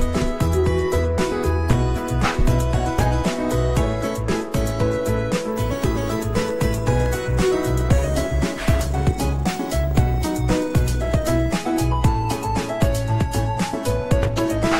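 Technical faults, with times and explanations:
6.51–7.25 s, CD scratch ticks: five brief ticks, about seven per second and none longer than a couple of milliseconds, as a scratch overwhelms error correction once per disc rotation.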